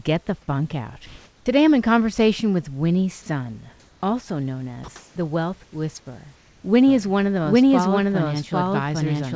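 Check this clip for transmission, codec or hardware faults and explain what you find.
Four kinds of fault are present, all tied to discontinuous transmission except the last, heard over a G.722 path with nothing above 8 kHz.

Comfort noise in place of the background at 1.06–1.46 s, 4.96–5.16 s and 5.64–5.72 s: the sender likely stopped transmitting during pauses, and synthetic noise replaces the room tone, shifting level by about 3, 5 and 2 dB.

Onset clipped by the voice detector at 1.44 s, just before "I'm in conversation with": the detector likely triggered late, losing 20 ms, so the speech starts abruptly.

Sound dropped by the voice detector at 4.84 s, right after "also known": 40 ms of sound was likely judged background, and comfort noise briefly replaces it.

Doubled audio track from 6.88 s to the end: a second full-band copy, about as loud and roughly 0.7 s behind, likely from a slower capture path, enters abruptly with no room colour.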